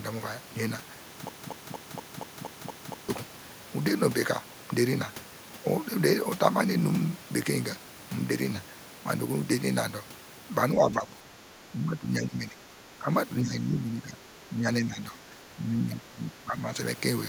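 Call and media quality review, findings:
Broken-record loop, 1.29–3.09 s: 236 ms chunk repeats back to back eight times, real audio lost. Likely a stalled player or decoder resending its last buffer.

Speech suppressed in double talk, 10.75–11.07, 11.23–11.51, 11.68–13.09, 13.43–14.21, 14.4–16.68 s: speech dips, about 5 dB early, about 10 dB later. Likely echo canceller ducking during overlap.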